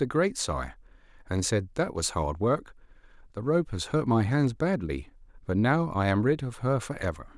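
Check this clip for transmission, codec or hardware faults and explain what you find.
Nothing in the speech points to a fault anywhere along its path. There is nothing here that calls for an explanation.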